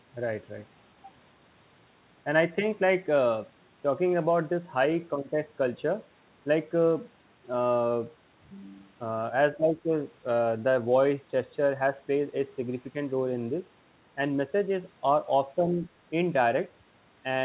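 An echo canceller likely mistook overlapping talk for echo, so speech is suppressed in double talk. The speech level dips by about 10 dB from 9.57 to 9.91 s, and by about 5 dB from 15.73 to 15.85 s.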